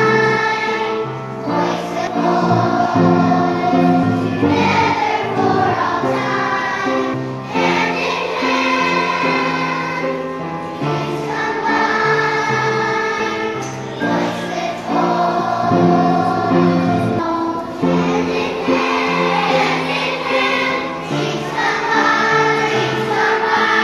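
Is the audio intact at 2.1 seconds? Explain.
No. At 2.07 s compressed frames are skipped: about seven frames of roughly 26.1 ms each never get played, so the audio jumps ahead by about a fifth of a second. The overlapping neighbours blur the join into a short smeared blip, not a sharp click.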